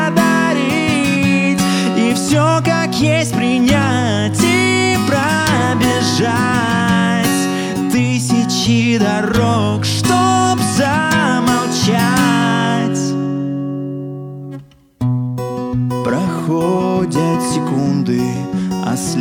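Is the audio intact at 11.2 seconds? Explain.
Yes, the audio is intact at 11.2 seconds, with no fault audible at that moment.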